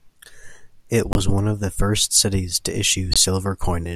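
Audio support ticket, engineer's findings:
Corrupt frame muted, twice: abrupt silent holes at 1.13–1.17 s before "one of the first" and 3.12–3.17 s after "the first cities to". Decoder rejected bad frames, player filled silence, about two frames each, timing intact.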